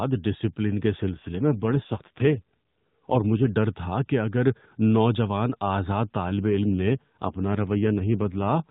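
On this speech clip, carried over the AMR narrowband mobile codec with its 4 kHz ceiling, an AMR rate drop occurs twice, from 1.12 to 3.49 s and from 6.28 s to the end, likely from link adaptation on a weak radio connection. The band stays narrowband and there is no gap, but the voice turns rougher and more synthetic, consistent with a fall from 12.2 to 5.9 kbps.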